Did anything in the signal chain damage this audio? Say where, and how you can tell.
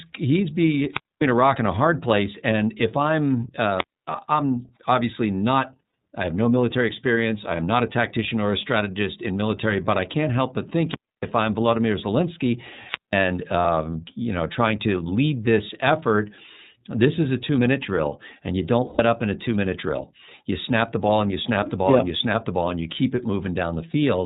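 Yes, in three places. The whole clip runs through the iLBC codec. Nothing above 4 kHz survives, and the speech has that slightly rough, synthetic edge from each frame's excitation being coded on its own. The damage is plainly audible throughout. The frame rhythm and texture fit the 30 ms mode at around 13.33 kbps. That's a narrowband VoIP codec stage, and it's doing what iLBC does to speech.

Before that, there's a wireless microphone squelch dropout at the radio link, four times: 0.9 to 1.26 s (right after "he's be", with the sound back at "a rock and a"), 3.76 to 4.10 s, 10.85 to 11.30 s, and 12.79 to 13.27 s. Each one has a rise of hiss, then near silence lasting about 250, 270, 280 and 190 ms. The FM signal faded, and the receiver's squelch shut the output until it recovered.

Then there are lost iLBC frames on the network side: 5.87 to 5.93 s, 13.62 to 13.66 s (just before "you know trying to"), 18.87 to 19.0 s (between "drill and you don't" and "up in a two"), and 23.90 to 23.94 s. 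Each gap is filled with a held, slightly buzzy vowel. The decoder is repeating the last pitch cycle with noise, and the longest gap, 120 ms, fades a bit. The durations fit whole 30 ms frames going missing. Speech snaps back cleanly because the frames stand alone.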